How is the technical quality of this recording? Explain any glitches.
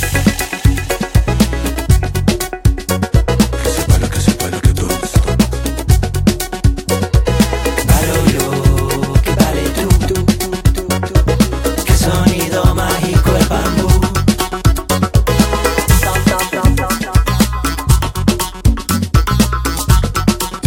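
No glitches can be heard anywhere in this recording.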